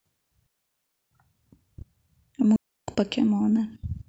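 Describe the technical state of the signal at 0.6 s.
At 0.6 s the signal is gone. A digital wireless dropout runs from 0.46 s to 1.11 s, a gap of about 0.65 s. The radio link lost too much data for the receiver to rebuild the audio, so it muted the output. The mute fades in and out very quickly. What you hear is a clean hole of near silence cut into the speech. There is no hiss, crackle or noise burst on either side of it.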